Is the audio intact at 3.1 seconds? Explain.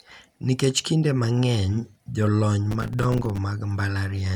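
No, 3.1 s lands inside a burst of processor overload crackle running from 2.71 to 3.38 s. The processor keeps missing its deadlines for tiny buffers of roughly 5 ms, and each miss drops in a hard-edged scrap of silence, so the speech turns gritty and torn.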